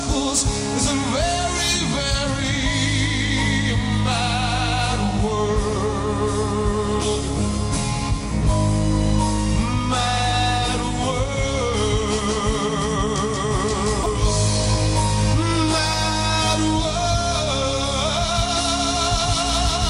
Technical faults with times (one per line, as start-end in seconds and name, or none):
none